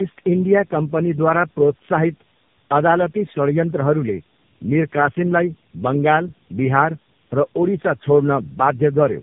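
Throughout, tandem speech coding: repeated decoding and re-encoding stacks the damage. The speech sounds rough, muffled and warbly, with nothing above 3.5 kHz.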